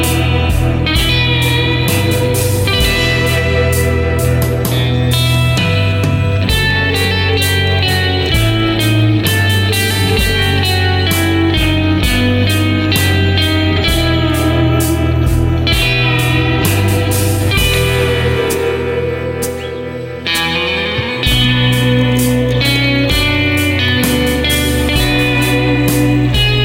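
Sample clock jitter runs through the whole clip. The converter's timing wanders by roughly a microsecond or two. Each sample lands a little early or late. Steep, fast-changing parts of the waveform suffer most. That adds a hiss-like roughness, around 35 dB below the sound, which follows loud and bright passages and disappears in silence.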